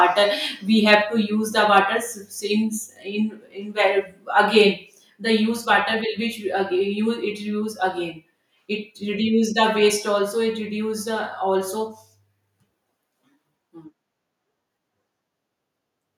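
From 0.88 to 0.95 s, just before "to use the", the loudest speech peaks are flattened and crackle harshly. This is microphone overload. The input was likely set too high, driving peaks about 2 dB past the converter's limit. Around one percent of samples are clipped.

At 1.02 s the level of speech and background drops abruptly by about 2 dB. This microphone volume step-down likely came from the call software reacting to that distorted peak.

From 1.77 to 1.79 s, right after "to use the", the microphone overload returns briefly. Peaks again exceed the limit by about 2 dB, likely from input gain still too high. Roughly one and a half percent of samples clip, giving another short crackle.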